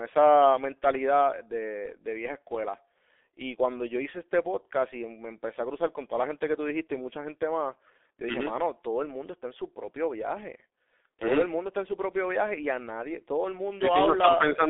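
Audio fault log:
throughout, G.723.1 codec: the speech is confined to 300 Hz to 3.5 kHz and sounds heavily muffled and hoarse, with smeared consonants, which fits a coarse voice model refreshed only every 30 ms at about 6 kbit/s. Simple band-limiting would sound narrow but clean, without this rasp.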